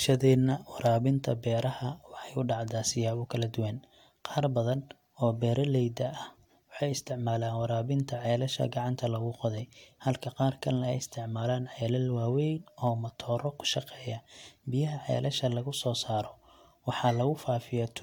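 Speech, with no technical faults audible anywhere in the recording.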